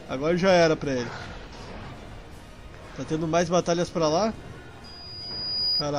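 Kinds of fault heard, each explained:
Loudspeaker feedback squeal: a single 4.9 kHz tone swells over about a second into a squeal above the sound, as the microphone picks up its own loudspeaker.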